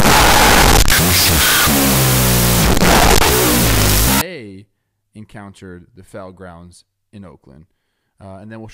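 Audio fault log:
0.00–4.21 s, wrong sample width: loud, harsh noise with the speech buried in it, at half speed and an octave low, which fits 16-bit samples read as unsigned 8-bit. A byte-order swap would also be noisy but would keep the original speed.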